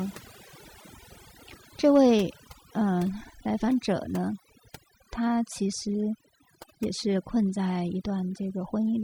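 Throughout the speech, overdone noise removal has cut individual frequency bands that sit near the estimated noise floor, taking quieter voice detail with them. The pauses fall to near silence with chirpy speckles. A spectrogram shows scattered isolated dots between words and ragged, hollowed-out harmonics.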